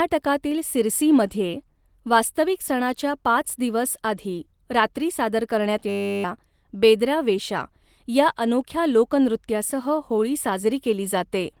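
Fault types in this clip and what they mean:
system hang loop: the computer or driver froze and one 10 ms buffer replayed 35 times, a 100 Hz buzz; waveform shows identical repeating cycles, spectrogram harmonics every 100 Hz.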